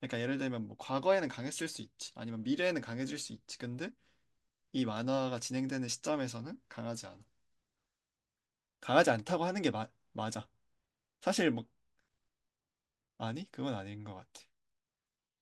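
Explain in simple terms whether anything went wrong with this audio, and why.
Nothing went wrong here: the speech runs along without any dropouts, glitches or other technical trouble that a listener would pick up on.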